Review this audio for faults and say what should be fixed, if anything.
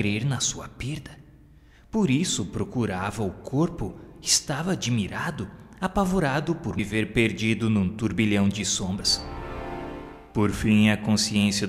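At 6.78 s, compressed frames are skipped. The audio jumps ahead about 70 ms, which points to roughly three missing 26.1 ms frames. Overlapping neighbouring frames smear the join into a brief blip, unlike a dropout's silent gap or a splice's hard click. Fix it by re-encoding from an intact source and checking the file for damaged or missing frames before delivery.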